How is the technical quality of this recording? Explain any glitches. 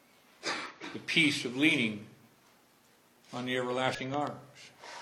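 The technical quality is compromised by three glitches in the last four seconds and the first second.

Damaged data in a compressed stream strikes twice, at 0.66–0.72 s and 3.95–4.00 s. Corrupted frames make the decoder lose sync and hunt for the next header, producing a brief glitch; a spectrogram shows a short smeared broadband patch and a discontinuity.

A loud pop, heard as two sharp pops from 4.14 to 4.29 s, peaks roughly ten decibels above the sound, likely from a voltage step such as a plug or switch. The waveform shows two tall spikes riding over the continuing signal.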